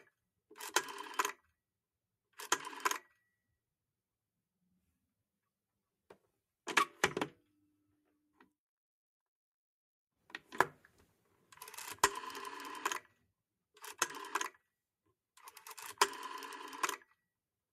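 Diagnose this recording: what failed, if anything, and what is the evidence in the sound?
Between 7.44 and 8.14 s the sound sinks, dipping by about 10 dB at its deepest, with the affected moments adding up to roughly a fifth of a second. This is sound cut by the noise suppressor, a call-processing stage: it misjudged this sound as background noise and applied extra gain reduction, which shortens decays and pulls sustained energy down more than sharper onsets.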